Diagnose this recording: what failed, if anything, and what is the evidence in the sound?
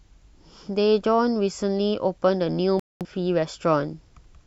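The failure is in broadcast reception and decoding, a digital broadcast dropout. The speech cuts to silence at 2.80 s and returns at 3.06 s, a gap of about a quarter second. The receiver lost the signal or got frames that failed their checksum, so it muted until good frames arrived. About 213 ms of programme is missing, which fits roughly five lost frames. Nothing sent during the gap can be recovered.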